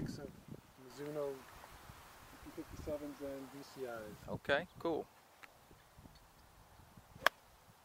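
No technical faults are audible.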